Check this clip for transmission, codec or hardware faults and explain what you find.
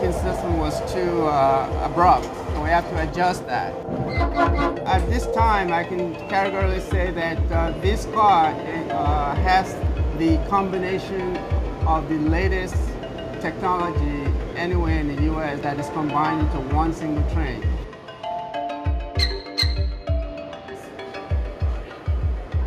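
Nothing wrong can be heard anywhere in this clip.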